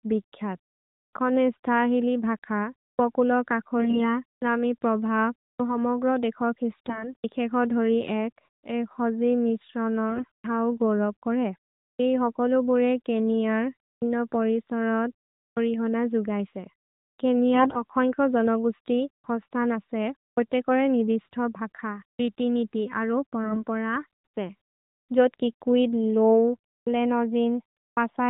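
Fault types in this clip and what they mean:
AMR bit errors: Corrupted, weakly protected bits inside AMR-NB frames decode without being rejected, so the codec rebuilds the speech from misplaced excitation pulses and slightly wrong gain, pitch and spectral values. In this clip five short bursts, each roughly a fifth to a third of a second, turn the narrowband voice hoarse and gargly while pitch and loudness hold. Unlike dropped packets, there are no gaps or concealment repeats, only a rough, scratchy texture where the sound continues.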